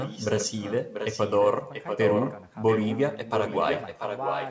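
A speech clip with a second copy of the talker trailing about 0.69 s behind, heard from 0.01 to 1.48 s, 1.73 to 2.44 s, 2.66 to 2.97 s and 3.33 to 4.5 s. It is sometimes well below the speech, sometimes as loud. This is an echo leak, likely from a far-end loudspeaker whose echo canceller let its microphone's pickup return.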